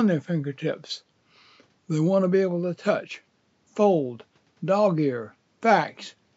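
Nothing in this audio stands out as a technical problem; it's all fine as far as a listener can tell.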